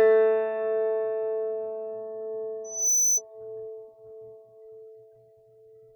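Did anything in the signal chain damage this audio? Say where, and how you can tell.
Yes. Loudspeaker feedback squeal runs from 2.64 to 3.22 s at the acoustic playback-to-microphone loop. A steady 6 kHz tone swells over roughly a third of a second to about 5 dB above the music, as loop gain at that frequency exceeds unity and recirculates.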